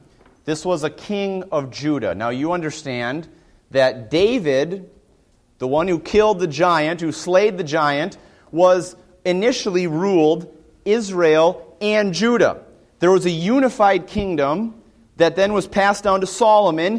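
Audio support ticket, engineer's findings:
No audible defects found on review; no dropouts, level jumps or interruptions anywhere in the file, so there is nothing to trace to a component.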